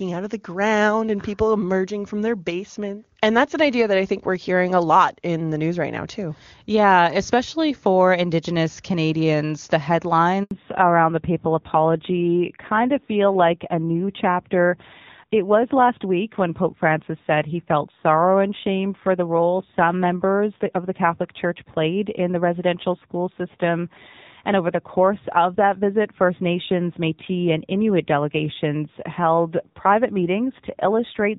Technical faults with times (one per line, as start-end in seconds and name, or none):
10.43-10.51 handover gap
10.51-31.38 fallback to narrowband